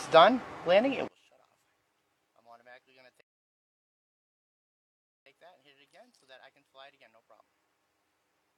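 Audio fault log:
1.08–8.58 s, one channel inverted: From 1.08 s to the end, one stereo channel is likely flipped in polarity, so the material shared by left and right cancels when the two are summed to mono. The mono sound drops by about 32 dB, and the centred content all but disappears. What remains is only the difference between the channels, which makes the audio faint.
3.21–5.26 s, rebuffering stall: At 3.21 s the player runs out of downloaded audio and halts until more data arrives. The sound cuts to silence for about 2.05 s and then picks up at 5.26 s exactly where it broke off. No material is skipped. The pause is simply inserted, so everything after it arrives that much later than it should.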